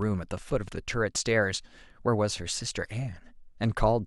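Speech, opening with a train of clicks from 0.02 to 0.69 s: about four near-identical pops, as loud as the speech, at irregular spacing averaging 4.6 per second, likely from interference or a faulty connection or power supply. On a spectrogram they show as thin full-height vertical lines, and on the waveform as sharp isolated spikes.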